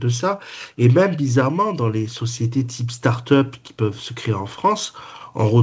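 No faults turn up anywhere in this speech; it has come through a call path whose audio stops at 8 kHz, which fits a wideband codec such as G.722 at 64 kbps.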